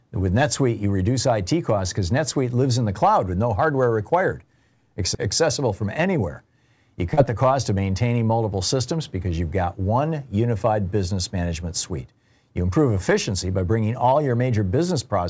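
From 7.14 to 7.19 s, just before "the cost of maintaining", a brief smeared wobble is heard: short concealed packet loss, where 40 ms never arrived and the decoder stretched the preceding sound across the gap.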